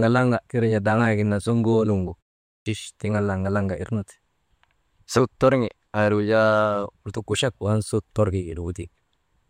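At 2.5 s there's a clipped start after a pause: following about 0.36 s of silence, the output wakes late and eats roughly 160 ms, so the speech jumps in abruptly.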